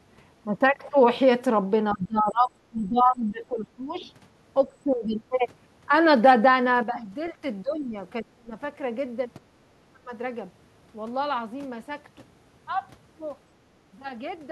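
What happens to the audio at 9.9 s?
Speech suppressed in double talk runs from 9.62 to 10.12 s, so 9.9 s falls right inside it. The likely cause is an echo canceller that couldn't tell the near talker apart from loudspeaker echo while both sides spoke at once, and so pulled everything down. The voice dips by as much as about 25 dB, with about 0.4 s of the span attenuated.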